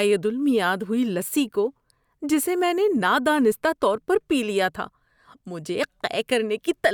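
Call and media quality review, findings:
No faults found; the speech signal shows no dropouts, level disturbances or timing problems across the recording.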